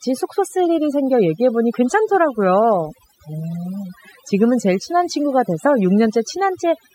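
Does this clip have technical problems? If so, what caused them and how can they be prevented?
Yes. The speech shows overdone noise removal for its whole length. A noise reduction process was pushed too hard on a noisy recording. It cuts individual frequency bands steeply whenever they sit close to its noise estimate. Quieter parts of the speech fall under that threshold and vanish too. The background drops and breaks up into small twinkling specks. To prevent it, use gentler reduction settings and reduce noise at the source when recording.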